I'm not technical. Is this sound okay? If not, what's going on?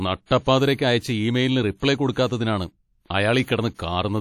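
No. Throughout, the speech sounds ringing and washy, with a hiss that rises and falls along with it. The likely cause is heavy WMA compression.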